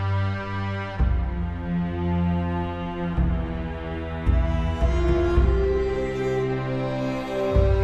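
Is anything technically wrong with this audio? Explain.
No, nothing technically wrong stands out here; it all sounds the way it should from beginning to end.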